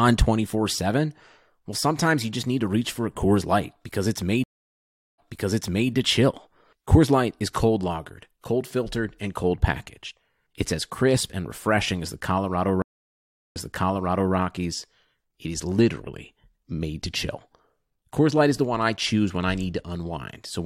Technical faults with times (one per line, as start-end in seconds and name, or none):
4.44-5.90 stream reconnect
12.82-14.34 stream reconnect